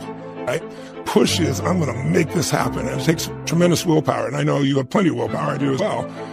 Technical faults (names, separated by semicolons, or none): damaged data in a compressed stream